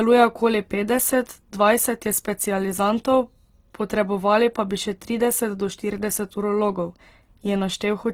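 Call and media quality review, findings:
Opus compression, whole clip: speech sounds grainy and rough, with noisy band filling instead of clean detail. Bandwidth stays full, up to about 20 kHz. Likely the CELT music mode starved of bits, which fits roughly 16 kbps.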